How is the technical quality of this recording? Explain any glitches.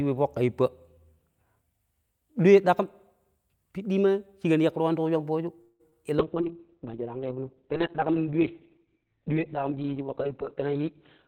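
The technical quality is poor in the second half, with four distinct call glitches.

From 5.61 to 5.96 s, a call audio freeze. The last sound stretches into a fading buzz for about 182 ms, likely because delayed packets emptied the jitter buffer.

From 5.90 to 5.94 s, short concealed packet loss. About 20 ms never arrived. The receiver extended the previous sound, leaving a brief smear.

From 6.21 s to the end, a call bitrate drop. The bitrate falls from 40 to 6 kbps and bandwidth from 20 kHz to 4 kHz. The speech becomes muffled and rough.

From 10.61 to 11.24 s, a jitter buffer speed-up. The receiver cut about 50 ms of pitch periods to shrink the delay. Speech runs 8% faster at unchanged pitch.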